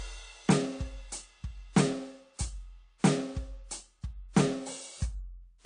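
Transcoding between lossy codecs runs throughout the music, from start to end. The top end stops dead at about 9.8 kHz, and the smeared, swirly treble of a heavily starved first encode sits under a second layer of coding grit. The likely cause is audio squeezed through a low-rate AAC-LC stage, around 32 kbit/s, then re-encoded to WMA at about 96 kbit/s. The later, roomier encode cannot restore the lost band and instead spends bits reproducing the earlier damage.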